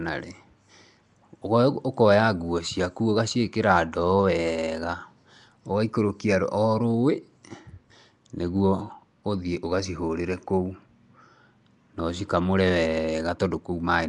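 Throughout the speech, a rough hiss clings to the voice and everything sounds smeared and underwater, with nothing above 10.6 kHz. The likely cause is Nellymoser compression: bands starved of bits are refilled with noise, giving a grainy halo rather than MP3's watery swirl, at a rate that fits about 44 kbps.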